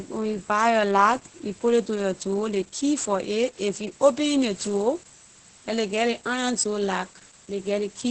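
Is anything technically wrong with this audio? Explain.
Yes. Throughout the speech there is heavy Opus voice compression damage. The voice sounds muffled and hoarse, with a faintly robotic edge, and there is nothing above about 8.5 kHz. This is Opus's SILK linear-prediction mode working in wideband: it models the voice with a coarse filter and a roughly quantised excitation, which thins out breath and consonant detail and caps the band. The level of damage fits a bitrate of around 10 kbps.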